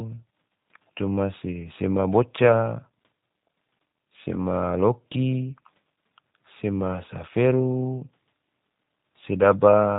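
From start to finish the speech has passed through a G.729 codec, and the damage is plainly audible. The coder keeps only a vocal tract filter, a pitch predictor and a sparse set of pulses for each 10 ms frame. Everything above 4 kHz is gone, so the sound is dull and slightly rough, with a synthetic, buzzy edge, consistent with an 8 kbit/s VoIP link. The faint room noise, about 50 dB below the speech, is part of the recording.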